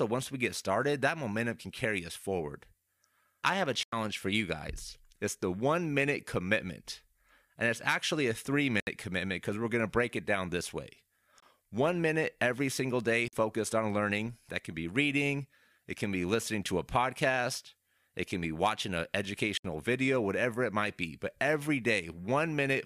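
Output buffers that were likely not filled in time leave five blocks of digital silence in this speech, at 3.83, 8.8, 11.40, 13.28 and 19.57 s, each a hard-edged 23 to 93 ms hole.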